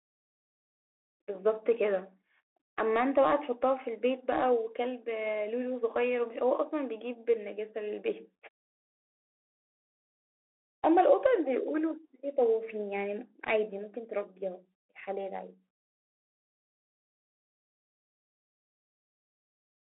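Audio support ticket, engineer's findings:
Bluetooth CVSD headset codec, whole clip. Speech confined to about 300 Hz–3.4 kHz. Granular hiss under speech, scratchy s sounds, distortion where loud high content outruns the adaptive one-bit step. Damage plainly audible; fits a 64 kbps headset link.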